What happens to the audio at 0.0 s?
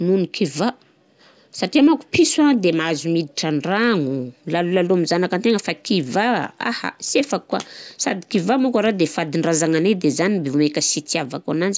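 Nothing goes wrong at 0.0 s; the audio is intact at that moment.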